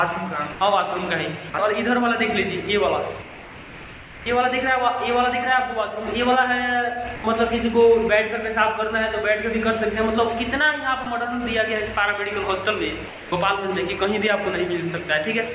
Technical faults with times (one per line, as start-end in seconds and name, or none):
0.52-0.60 sound dropped by the voice detector
1.50-1.54 sound dropped by the voice detector
3.22-4.26 sound dropped by the voice detector
7.16-7.24 sound dropped by the voice detector
11.04-11.06 sound dropped by the voice detector
13.08-13.32 sound dropped by the voice detector